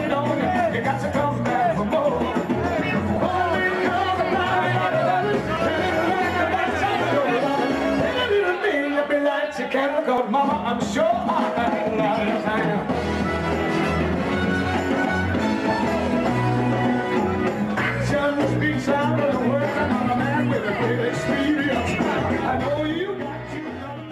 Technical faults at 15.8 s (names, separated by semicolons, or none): none